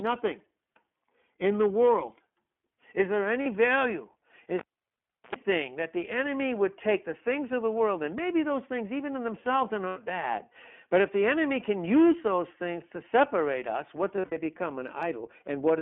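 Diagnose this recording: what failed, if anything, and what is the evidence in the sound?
The codec stage failed throughout. This is iLBC codec damage, plainly audible. The speech is band-limited to roughly 300 Hz to 3.4 kHz and sounds rough and synthetic. That fits the 15.2 kbps mode with 20 ms frames, each coded independently.

The analogue wiring failed from 4.59 to 5.35 s. This is a cable pulled and plugged in. A pop opens near-silence lasting about 0.71 s. A 60 Hz mains buzz of about 86 ms follows as the tip touches. A second pop brings back "that the enemy would".

The network failed from 14.16 to 14.37 s, right after "to separate us what". These are lost iLBC frames. The decoder filled the gaps with a repeated pitch cycle mixed with noise. About 140 ms is missing, scattered over 200 ms. The longest gap is around 70 ms.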